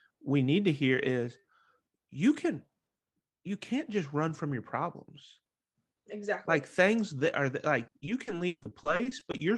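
From 7.83 to 9.41 s the speech breaks into repeated packet loss (robotic sound). Holes arrive one after another, the longest about 140 ms. Around 30% of the stretch is patched by stretching the preceding sound, giving choppy speech with pieces missing rather than the silent gaps of plain dropouts.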